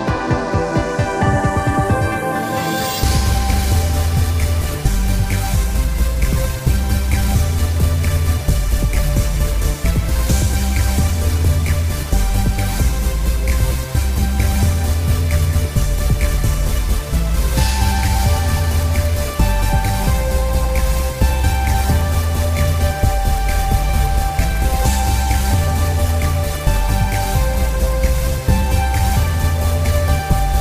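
No dropouts, distortion, level jumps or timing breaks are audible anywhere in the recording.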